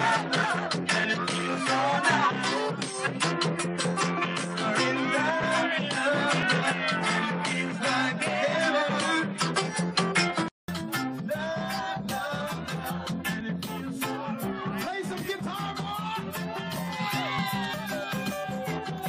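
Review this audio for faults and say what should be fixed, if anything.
For the first 10.68 s the input was likely running on a poorer capture device, such as a second microphone or a headset's call profile, before returning to the proper source. While it is in use, the band stops at 10.5 kHz, so the sound is dull and boxy, with its own background noise around 45 dB below the signal and a level offset of roughly 5 dB. At 10.68 s a 200 ms silence marks the switch, after which the audio opens up again. To prevent it, lock the recording to the intended device and disable automatic device or profile switching.

Overlap between stream segments occurs at 1.42, 5.43, 6.43, 9.42, 13.41, 15.39 and 17.39 s. The segments are 1 s long, and at these boundaries their time stamps overlap. The player trims the overlapping span even though that audio was never duplicated, so about 15 to 20 ms is lost each time. 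The waveform jumps across the gap, producing a small click or skip at each boundary. To prevent it, generate segment time stamps from a continuous sample count so adjacent segments meet exactly.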